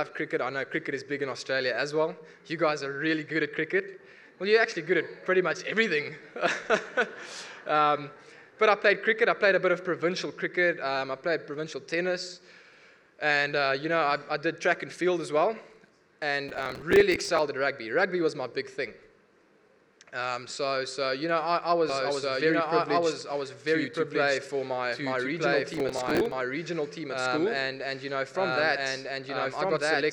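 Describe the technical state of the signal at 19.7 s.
At 19.7 s the signal is intact, with no audible fault at that moment.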